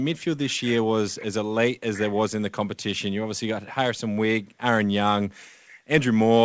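No technical faults heard.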